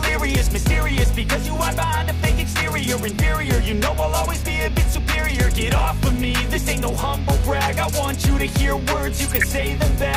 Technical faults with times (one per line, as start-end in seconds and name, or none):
6.55 DAB burbling
9.28-9.44 DAB burbling